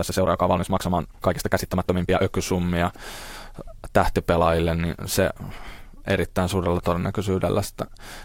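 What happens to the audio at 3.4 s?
Nothing goes wrong at 3.4 s; the speech carries straight through that moment with no dropout, click, glitch or other fault.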